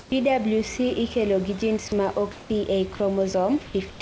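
A short speech recording over a call link where nothing gets above 8 kHz, which fits G.722 wideband. At 0.00–0.12 s and again at 3.90–4.00 s the real room background turns into a flat, featureless hiss about 2 dB quieter, likely comfort noise in place of the background while transmission paused. Mid-speech, bits of sound get swapped for that same steady noise at 1.88–1.92, 2.32–2.50, 2.96–3.00 and 3.66–3.74 s, likely sound dropped by the voice detector mistaking the sound for background.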